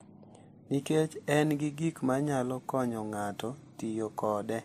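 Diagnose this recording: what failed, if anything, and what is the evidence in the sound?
Codec stage: the speech shows the mixed artefacts of transcoding between lossy codecs, running through the whole clip. Nothing is present above 15.2 kHz, and the swirly, smeared coding noise of a low-rate first pass sits under a second, different layer of quantisation grain. The likely cause is an MP3 encode at around 46 kbit/s later re-encoded to WMA at about 96 kbit/s. The higher second bitrate cannot restore detail the first pass discarded, and it spends bits reproducing those earlier artefacts.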